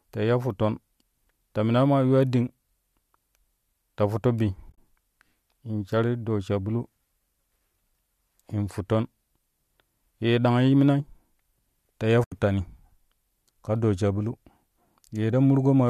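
Speech, likely carried by low-delay AAC, suffers AAC frame loss with muting: lost frames decode as silence, leaving soft-faded gaps at 4.70–4.78 s (broken up, longest run about 30 ms) and 12.24–12.32 s.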